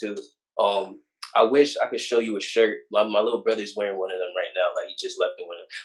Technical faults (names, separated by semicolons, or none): none